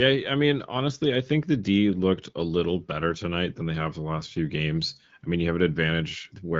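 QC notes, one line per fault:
No faults to note in this speech clip.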